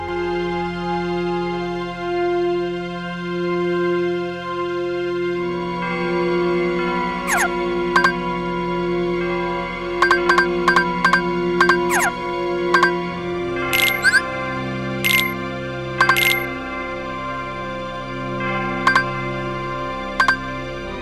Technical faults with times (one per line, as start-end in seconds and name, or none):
0.00-21.02 channel delay (doubling)